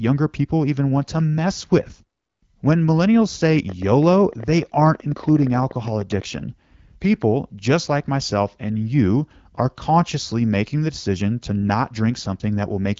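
From 3.46 to 6.23 s, repeated pulses, likely interference from nearby equipment or a faulty connection or power supply, inject a train of clicks into the speech. Around forty arrive at an uneven pace averaging 14.2 per second, each roughly as loud as the speech, heard as ragged ticking and popping.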